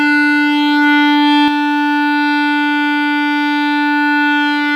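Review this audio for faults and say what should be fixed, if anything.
Doubled audio track, from the start to 1.48 s: the music sounds twice, a copy at roughly equal level trailing about 150 ms behind, then cutting off abruptly, likely from a second slower capture path. Prevent this by routing the source through only one capture path and checking edits for duplicated, misaligned regions.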